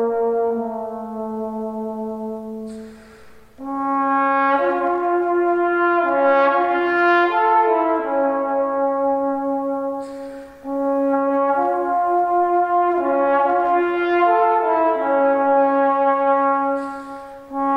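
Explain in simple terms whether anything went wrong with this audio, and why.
Listening closely, nothing in this audio stood out as having gone wrong.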